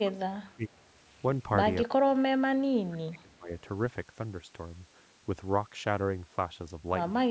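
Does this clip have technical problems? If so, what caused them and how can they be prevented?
Yes. The speech is pushed down twice, from 0.02 to 0.81 s and again from 1.94 to 3.5 s. In both stretches the level drops by roughly 25 dB at its deepest, so the talker fades. This is likely speech suppressed in double talk. The echo canceller seems to have heard both sides at once and treated the near talker as echo. Using a headset or a better double-talk detector would prevent it.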